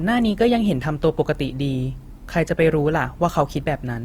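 From start to finish the speech carries plainly audible coding damage, likely Opus compression in its music-style CELT mode at a low rate, consistent with something near 24 kbps. The band energies are held but the fine detail inside them is rebuilt from folded lower bands or noise, so the sound comes out grainy and rough rather than swirling. Bandwidth is not trimmed; content reaches about 20.2 kHz.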